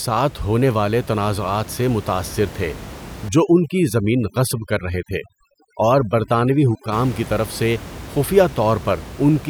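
Between 3.29 and 6.92 s, after "تنازعات سے متاثر تھے" and up to "کی طرف سے خفیہ", overdone noise removal cuts bands lying near the noise estimate. The background drops and breaks up into twinkling specks. That separates it from the room noise sitting about 16 dB below the speech.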